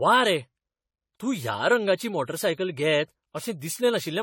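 From start to end the speech has a swirly, hollow, smeared quality with blurred consonant attacks and nothing above 18.9 kHz, likely generation loss from around ten re-encodes at about AAC-LC 64 kbit/s, each pass compounding artefacts on shifted frames, far murkier than one 64 kbit/s encode.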